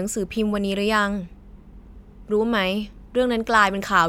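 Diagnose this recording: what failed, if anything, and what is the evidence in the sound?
Nothing failed; no fault detected.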